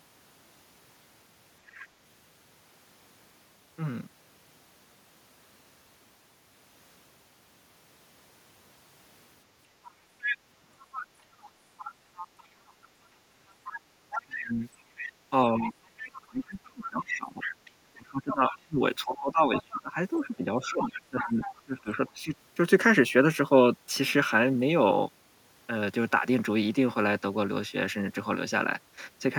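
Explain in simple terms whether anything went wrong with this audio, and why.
A second, fainter voice can be heard behind the main talker: a faint blip at 1.73 s, clearer stretches from 9.85 to 12.47 s and 13.49 to 18.56 s, then brief scraps at 19.56 s and 20.83 to 22.11 s. This is the other side's voice leaking through, likely because the talker's loudspeaker sound reached their microphone and the echo cancelling didn't fully remove it.

Between 14.2 and 22.34 s, while that other voice overlaps, the main talker keeps dipping sharply or partly vanishing, adding up to about five seconds. This is speech suppressed in double talk: with both people talking at once, the echo canceller likely couldn't tell them apart and turned the talker down along with the echo.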